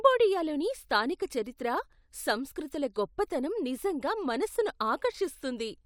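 Nothing technical goes wrong anywhere in this bit of speech, so there's no fault to point to at any moment.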